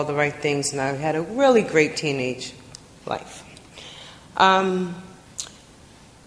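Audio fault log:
No audible faults detected.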